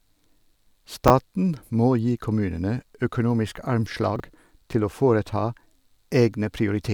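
At 1.08 to 1.10 s and again at 4.16 to 4.20 s, between "må gi kommunene økonomisk" and "til å", chunks play out of order: a 10 ms block arrives one chunk late, then three chunks late, giving a brief jumbled moment. The waveform shows abrupt discontinuities at the three joins of each event, visible as thin vertical broadband lines on a spectrogram.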